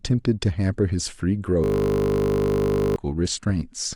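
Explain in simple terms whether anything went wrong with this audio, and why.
Yes: from 1.64 to 2.96 s, a system hang loop repeats one 20 ms scrap of speech, making a steady 50 Hz buzz rather than silence or stutter.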